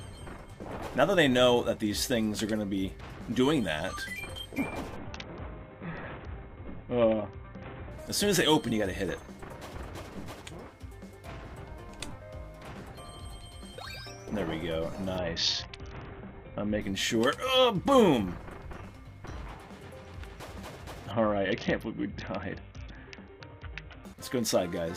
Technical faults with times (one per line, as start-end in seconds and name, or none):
4.96-7.91 Bluetooth SBC bit pool drop
15.18-16.81 Bluetooth SBC bit pool drop
21.11-24.04 Bluetooth SBC bit pool drop